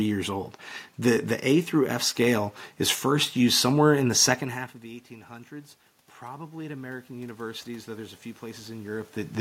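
At about 4.5 s, just after "the second half of", the talker moves away and the voice drops by about 20 dB. From 4.8 s to 9.15 s automatic gain rising follows: the gain control, finding the input too quiet, slowly raises its gain by about 9 dB. The voice swells back gradually, and the room noise swells with it. That shared rise in the background is what separates it from a talker simply coming closer.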